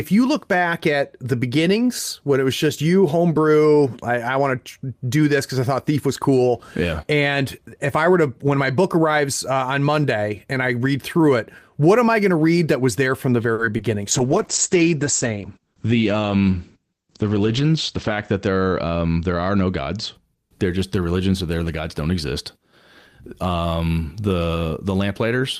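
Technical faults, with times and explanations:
13.53–13.66 s, short stall from a late packet: after "was there from the", a late packet empties the jitter buffer and the last sound is held 50 ms. The spectrogram shows smeared, repeated harmonics.
13.77–13.81 s, short concealed packet loss: 20 ms never arrives and is filled by extending the previous sound, giving a brief smear or wobble. A blurred patch shows on the spectrogram.
14.13–20.21 s, call bitrate drop: the bitrate falls from 40 to 11 kbps, and the bandwidth narrows from 20 kHz to 8 kHz until "they're just the religions". The audio sounds muffled and watery, and the spectrogram shows a flat ceiling at 8 kHz.
15.59–16.17 s, jitter buffer speed-up: the buffer sheds excess delay by cutting roughly 70 ms of pitch periods. Speech plays about 9% faster at the same pitch, and the waveform looks compressed in time.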